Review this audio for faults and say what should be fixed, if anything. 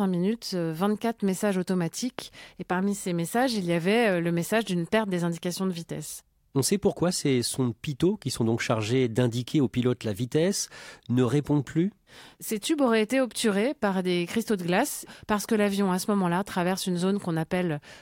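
A single loud pop occurs from 2.19 to 2.23 s. It is a sharp transient peaking roughly 15 dB above the speech, which carries on underneath. It is likely a voltage step from a connector, switch or static discharge. Secure all cables and avoid switching equipment while recording.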